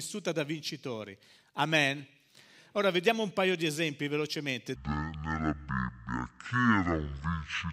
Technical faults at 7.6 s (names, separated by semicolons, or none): section at the wrong speed